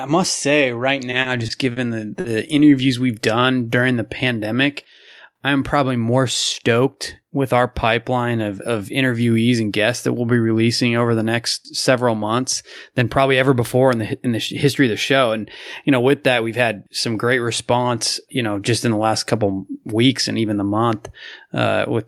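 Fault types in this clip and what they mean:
Repeated stalls (stutter), 1.11 to 1.78 s: Right after "must say right", the speech drags and catches four times. Packets reached the receiver late or more slowly than they were played, so its jitter buffer kept running dry. Each time the receiver stretched the last sound to cover the wait. About 90 ms is filled this way, the longest hold lasting 40 ms, roughly 13 percent of that stretch. No speech is lost.
Short stall from a late packet, 2.20 to 2.26 s: Just before "interviews we've done during", one sound is held too long. A packet missed its playout time and the buffer emptied, so the receiver extended the preceding audio by 40 ms until the packet arrived, then picked up exactly where it left off. Nothing is skipped, but the playback delay grows by 40 ms at that point, and the hold brings a faint buzz or dip.
Jitter buffer speed-up, 12.15 to 12.39 s and 18.91 to 19.13 s: The first comes just after "over the next several". 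The receiver had more audio queued than it aims to hold, so it trimmed tiny pitch-period-sized slices in quick succession to pull the delay back down. Each time around 40 ms is removed, and the speech briefly runs at about 111 and 113 percent speed at unchanged pitch, sounding rushed.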